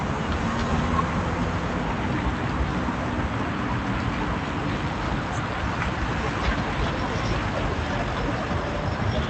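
No technical faults can be heard in this recording of sounds. It has gone through a WebRTC call path, with the top end stopping at about 8 kHz and the coding texture of an Opus stream at a rate that fits about 64 kbps.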